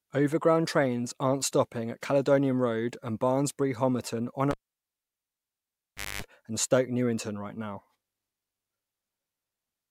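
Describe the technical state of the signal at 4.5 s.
At 4.51 s the cable is pulled and plugged in again: a pop, about 1.66 s of near silence, then a 0.23 s burst of 50 Hz mains buzz as the tip touches, and a second pop at 6.22 s. That hum burst separates it from a plain dropout.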